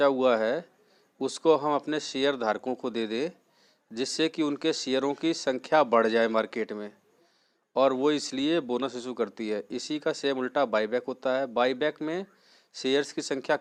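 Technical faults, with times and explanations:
No technical faults detected.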